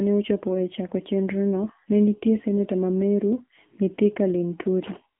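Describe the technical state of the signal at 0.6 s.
At 0.6 s, as throughout, the AMR narrowband mobile codec, at a rate fitting 7.4 kbps, models speech coarsely and removes everything above 3.6 kHz, leaving it thin, buzzy and synthetic.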